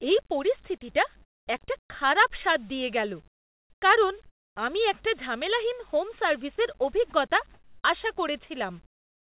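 A speech recording in which the pauses between phrases lose their real background and are filled with comfort noise in place of the background, a steady, featureless hiss at 1.22–1.48 s, 1.82–1.90 s, 3.28–3.82 s, 4.26–4.56 s, 7.54–7.84 s and from 8.86 s to the end. The background sits about 33 to 37 dB below the loudest parts. The fill drops the level by about 12, 1, 12, 14, 4 and 20 dB respectively, so most pauses dip noticeably. The likely cause is discontinuous transmission: the sender stops sending during silence and the receiver synthesises shaped noise. At 7.10 s a brief 20 ms slice of sound is dropped by the voice detector and replaced with the same noise, as if the detector briefly judged that moment to be background. Nothing is present above 4 kHz, which fits a G.711 mu-law call path at 64 kbps.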